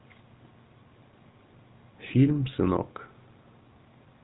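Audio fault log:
Throughout: GSM full-rate codec. The speech has that gravelly, buzzy grit you get when a vocal-tract model is driven by sparse regular pulses, and nothing gets past about 3.9 kHz, so it's dull and boxy. The damage is plainly audible, which fits the old 13 kbps GSM rate.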